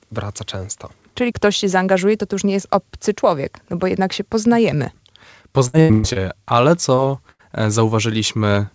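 This is speech carried over a call path, with nothing above 8 kHz, which fits a wideband codec such as G.722 at 64 kbps. From 5.68 to 6.17 s there is repeated packet loss, giving a robotic sound. Four gaps follow one another closely. The receiver patched them by continuing the last sound. About 0.28 s was filled, over half the stretch, and the longest gap was 120 ms. The result is choppy, with pieces missing. From 6.95 to 7.00 s there is a short concealed packet loss. About 20 ms never arrived in time. The hole was filled from the preceding sound and then blended back, leaving a brief smear. From 7.32 to 7.41 s there is a burst of packet loss. The receiver filled 75 ms by continuing the last sound and fading it down. Speech then resumes with about 80 ms of audio missing.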